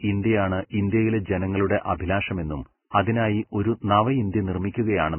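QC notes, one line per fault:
Throughout: Vorbis compression. The speech is hissy and grainy, with nothing above 3 kHz, which points to a very low bitrate near 10 kbps. The likely cause is a heavily starved Vorbis encoder: it cuts the treble and quantises the remaining detail so coarsely that it turns to noise.
2.91–2.94 s and 3.02–3.07 s: pre-echo. A short smear of hiss, about 31 ms and then 45 ms long, runs ahead of two sharp onsets. The codec spreads the quantisation noise meant for each loud attack across the quiet stretch before it, softening both attacks.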